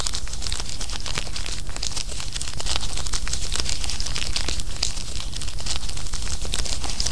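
No technical faults are audible.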